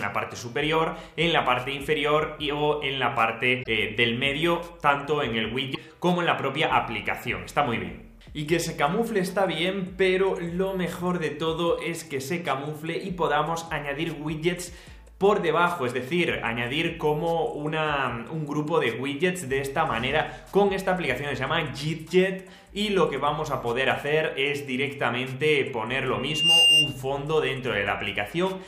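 At 3.59 to 3.67 s, and again at 5.71 to 5.77 s, short bursts of damaged data in a compressed stream break through, lasting well under a tenth of a second each. Corrupted bytes leave the decoder unable to read those frames, so it loses sync and hunts for the next valid header. Unlike a plain dropout, each burst comes from frames the decoder misreads or refuses rather than from a simple loss of signal.

From 26.16 to 27.02 s, a loudspeaker feedback squeal takes over. A single 2.8 kHz tone swells in about a third of a second and settles roughly 10 dB above the rest of the sound before it cuts off. The microphone is picking up its own loudspeaker, and the loop gain at that frequency exceeds one, so the tone feeds itself. Its steady pitch and self-building rise set it apart from a short, noisy codec glitch.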